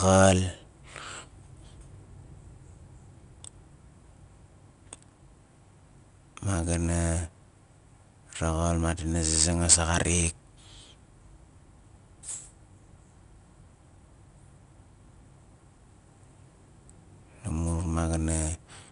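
Throughout the speech, 4-bit ADPCM compression codes each sample as a coarse step from a predicted value, leaving error noise that tracks the level. The result is a plainly audible gritty hiss on louder syllables, roughness on sharp onsets, and nothing above 10.6 kHz, which points to about 89 kbps.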